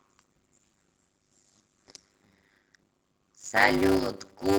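Throughout the speech runs a steady 100 Hz buzz, and everything plays at about 0.53 times normal speed while the pitch stays natural. This is a block size mismatch (padded): each block carries only 256 samples of real audio, which fits a 480-sample read block, and the rest is filled with zeros. The buzz and the unchanged pitch set it apart from simple slowed playback.

At 0.73 s the audio skips ahead: roughly a second of speech is gone, and the two sides are joined with no audible gap. Without the silence of a dropout, it sounds like an abrupt splice rather than an interruption.

From 0.83 to 1.84 s a jitter buffer speed-up drives the speech at 110% speed, and from 2.70 to 3.36 s at 113%. Each time about a tenth of a second of pitch periods is trimmed away, so delivery sounds hurried at unchanged pitch, unlike a single skip.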